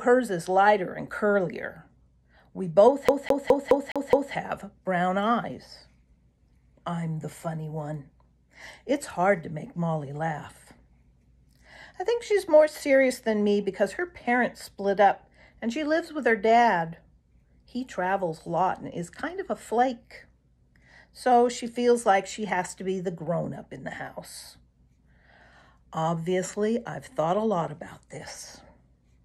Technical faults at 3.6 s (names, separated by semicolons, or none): CD stuck on one turn